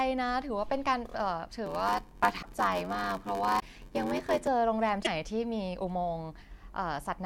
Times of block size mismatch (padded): 1.65-4.47

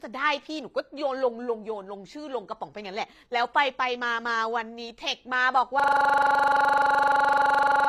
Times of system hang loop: 5.80-7.89

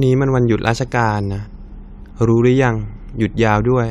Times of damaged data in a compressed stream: 1.45

